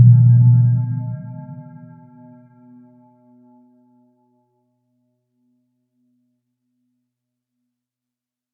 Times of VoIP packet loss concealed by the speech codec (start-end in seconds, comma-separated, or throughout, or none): none